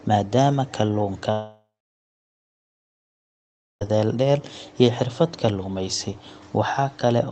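At 1.31 s the speech turns into a fading buzz for a few tenths of a second, then goes silent until 3.83 s, likely a long network dropout with concealment. The spectrogram shows smeared harmonics dying into a blank gap, and the waveform flattens to near zero.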